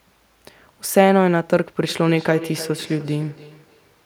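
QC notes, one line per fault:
1.88–4.03 s feedback echo between two devices: the speech returns at a regular spacing of roughly a third of a second, the loudest return sitting about 16 dB below the direct sound, with a thin, ringing tone. A second device in the room is replaying this microphone's signal, which is picked up again and missed by the local echo canceller. On a spectrogram each word appears again as a fainter copy, evenly spaced in time; the waveform shows matching delayed bursts.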